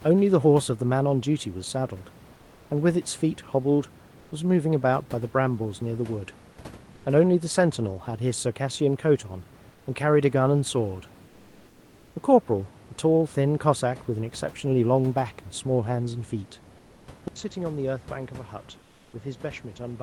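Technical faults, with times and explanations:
2.35–2.69, 4.19–4.31, 9.71–9.85, 11.27–12.15, 16.77–17.07 and 18.77–19.13 s, comfort noise in place of the background: in these pauses the real room noise, about 27 dB below speech, gives way to steady, featureless hiss, likely from Opus discontinuous transmission. The receiver synthesises this filler while the sender is silent. It runs about 1 dB louder at 4.19 s and 2 to 5 dB quieter in the other gaps.
17.28 s to the end, input switched to a poorer device: an 80 ms silence marks the switch. After it the sound turns duller, with nothing above 7.6 kHz, drops about 10 dB and sits over a different, quiet noise floor. This fits a change to another microphone or a headset's call profile.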